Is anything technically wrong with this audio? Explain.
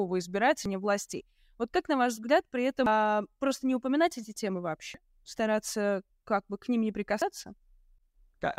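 Yes. The speech has damaged data in a compressed stream at four points, each about 32 ms long: 0.66–0.69 s, 2.86–2.90 s (between "на ваш взгляд при" and "просто не упоминать эти"), 4.94–4.98 s (just after "не упоминать эти темы"), and 7.22–7.25 s. Corrupted bytes make the decoder misread or reject those frames and lose sync until it finds the next frame header. Each break comes through as a chirp, squawk, click or short hole.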